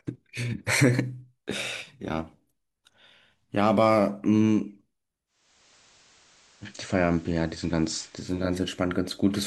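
From 5.26 to 8.63 s, digital radio blending to analogue: it cross-fades over 472 ms to FM, adding hiss.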